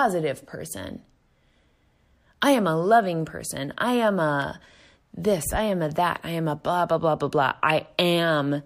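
A speech clip with one repeated buffer at 4.42 s, just after "loving person I am": a roughly 1.45 ms piece of audio plays twice with a hard join, producing a brief click. The length fits a 64-sample buffer.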